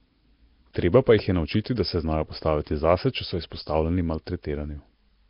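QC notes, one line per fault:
Throughout: Nellymoser compression, heavy. The speech carries a rough, hissy halo and a smeared, underwater character, and nothing is present above 5.3 kHz. This is likely Flash's Nellymoser Asao codec, at a rate that fits around 22 kbps. With a fixed two bits per sample in short blocks, weak bands get no bits and are filled with noise. On a spectrogram, a hard ceiling sits at 5.3 kHz over grainy, speckled noise fill between harmonics.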